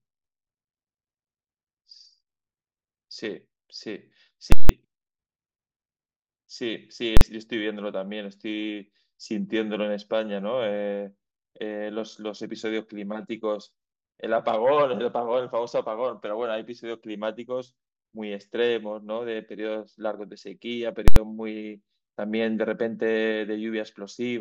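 At 4.52 s, 7.17 s and 21.08 s, invalid numbers at full scale replace the speech. A calculation went infinite and pinned the output at one extreme value for 171, 43 and 85 ms. The first and last give loud pops at both edges with silence between. The waveform shows flat rails, and the spectrogram shows broadband vertical lines at each edge.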